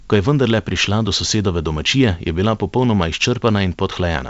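Nothing goes wrong anywhere in this speech, which comes down a G.722 wideband telephone link at 64 kbit/s, with the top of the sound stopping at 7.8 kHz, just where that coding leaves it.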